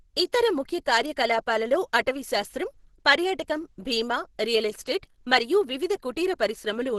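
From start to finish the speech has nothing above about 12.1 kHz and sounds muffled and hoarse, with a rough, grainy edge on voiced sounds. This is likely Opus compression at a very low bitrate, in the region of 12 kbps. At that rate the encoder appears to run in its hybrid mode, coding the lower band as speech and thinly filling the upper band, which narrows the bandwidth and leaves heavy, constant damage.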